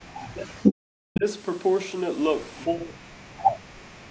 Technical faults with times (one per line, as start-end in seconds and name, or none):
0.23-1.25 speech suppressed in double talk
1.14-1.20 echo leak
2.66-3.92 speech suppressed in double talk